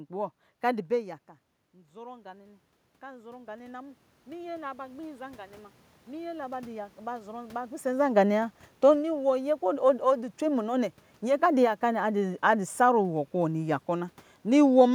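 Automatic gain rising runs from 1.0 to 5.49 s. When the talker moves away around 1 s, the input drops by about 17 dB, so the gain control slowly lifts its gain by about 11 dB, and the room noise swells along with the voice.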